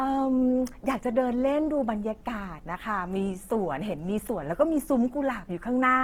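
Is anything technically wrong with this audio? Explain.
Yes. Throughout the speech there is plainly audible damage that is likely Opus compression. The encoder keeps each band's energy but runs short of bits, so it fills bands with folded copies of lower ones or with noise. Tonal parts of the sound turn rough, grainy and hissy, which fits a low bitrate around 16 kbps in Opus's music mode. Unlike MP3, there is little swirling or spectral holes. The full bandwidth is kept, reaching about 20.3 kHz, so the sound is not muffled.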